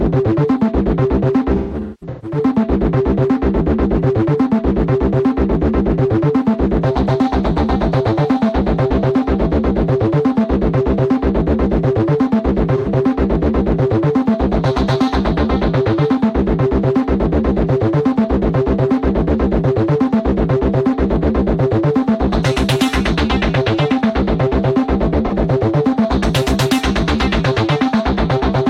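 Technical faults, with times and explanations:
1.55–2.38 s, 12.77–12.88 s and 25.26 s: AAC frame loss with concealment. Lost frames, about 0.51 s scattered across the first span in runs of up to roughly 0.2 s, then about 85 ms and 43 ms, were rebuilt from the last good spectrum. The gaps sound smeared and noisy rather than silent, which distinguishes them from a plain dropout.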